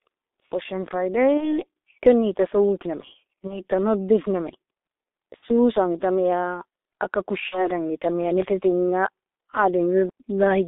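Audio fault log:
throughout G.723.1 codec. The speech is confined to about 300 Hz to 3.7 kHz, so it sounds muffled. Heavy coding damage makes it hoarse and blurs consonants. The slow, coarse voice model fits a low-rate codec near 6.3 kbit/s.
1.37–1.65 s, 3.47–3.63 s, 5.36–5.45 s, 7.49–7.70 s, VoIP packet loss concealed by the speech codec. Each gap points to one lost 30 ms frame, or two at 5.36 s. The decoder stretches its last sound into a buzzy tone or coloured noise that fades. The voice stays weak briefly afterward.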